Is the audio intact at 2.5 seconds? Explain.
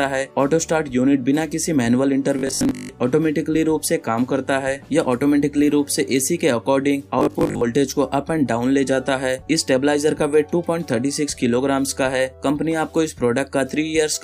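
No. From 2.39 to 2.93 s, new audio likely arrived too seldom, so the last 20 ms or so was replayed to fill the gaps, with about half the sound repeated. This robotic sound from repeated short buffers imposes a rigid, metallic 50 Hz buzz.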